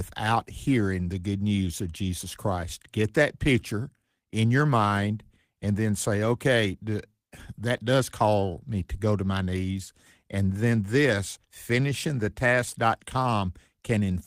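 No technical faults detected.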